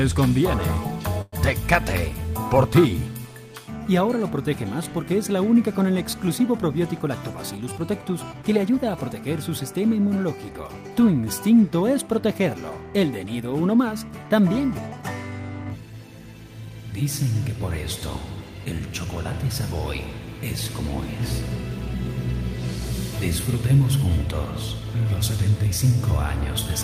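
At 1.21 s the sound stalls for about 0.13 s, which points to a call audio freeze, likely from delayed packets emptying the jitter buffer. The last sound continues as a fading buzz or hiss for 110 ms, then 20 ms of silence. Playback resumes where it stopped, nothing lost, but now 110 ms later.

From 7.63 to 8.77 s a jitter buffer speed-up trims the added delay. Short pitch-period slices are cut repeatedly, about a tenth of a second in total, so the audio runs at 108% speed with unchanged pitch and sounds hurried.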